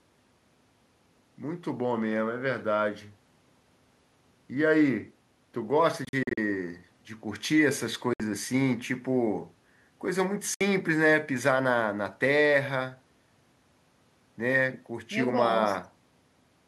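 From 6.05 to 6.38 s the speech breaks into scattered silences, about 160 ms lost, the longest about 40 ms. Clean 60 ms holes follow at 8.13 and 10.54 s. This is likely a Bluetooth dropout, with late packets discarded. Unlike a stall, the sound resumes further on, not where it stopped.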